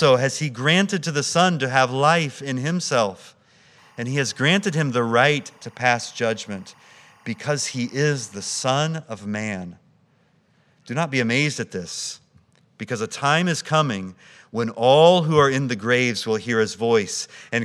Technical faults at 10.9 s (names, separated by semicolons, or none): none